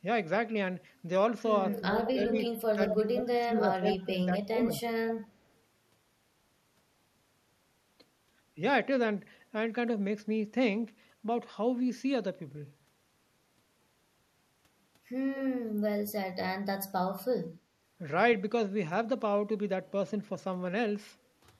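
From 1.7 to 2.34 s the speech dips by about 10 dB for roughly 0.4 s in total, the first instance of speech suppressed in double talk. It returns from 2.68 to 4.29 s, cutting about 20 dB at its deepest across roughly a second, and again from 4.45 to 4.71 s, where the drop reaches about 30 dB and the speech nearly vanishes. The likely cause is an echo canceller that could not tell its own talker from loudspeaker echo while both sides spoke, so it turned everything down. What sets this apart from the other fault is that speech is taken away and nothing is added.

Overlapping those stretches is echo leak. A delayed copy of the speech, trailing it by 194 to 195 ms, surfaces in short scraps at 1.74–1.82 s and 2.3–2.52 s, both about 15 dB below the speech. It is loudest at 2.9–3.0 s, only about 5 dB down, and sits about 10 dB down at 3.87–4.1 s. A last, barely audible trace at 5.23–5.28 s is about 35 dB down. 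This is likely residual echo from a loudspeaker side whose canceller let part of the microphone pickup back through. Unlike the suppression, it adds a repeated copy of the speech at a fixed delay.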